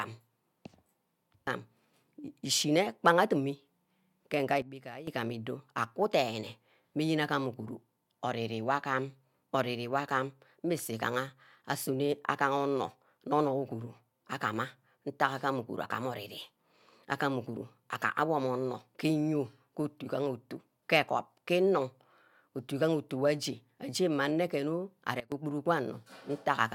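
Sudden gain jump at 4.62 to 5.07 s and at 25.20 to 25.32 s: speech and background noise drop together by about 12 dB, then about 17 dB, likely from gain applied instantly without a ramp.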